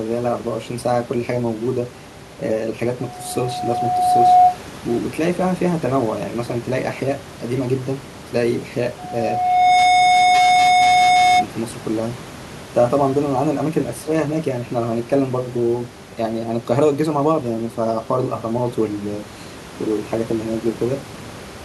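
From 8.98 to 11.46 s the microphone picks up its own loudspeaker, and the loop gain exceeds one at 728 Hz. That tone grows over roughly three-quarters of a second into a loudspeaker feedback squeal about 10 dB above the speech, riding well over the faint room noise.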